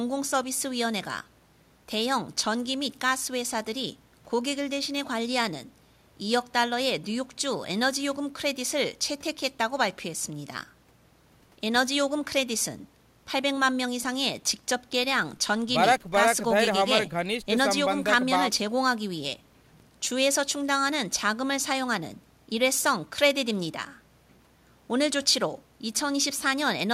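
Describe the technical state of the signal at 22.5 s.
At 22.5 s the speech signal is intact, with no audible fault at that moment.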